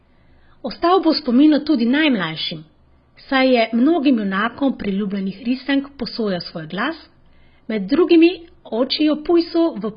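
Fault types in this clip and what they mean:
AAC compression: The speech sounds dull and smeared all the way through, with nothing at all above 5 kHz and a warbly, fizzy edge on sustained sounds and sibilants. That's heavy damage, most likely from an AAC-LC encoder starved for bits, which fits something around 16 kbps. At that rate the encoder pulls its cut-off down hard and quantises the remaining spectrum so coarsely that gaps open up between bands.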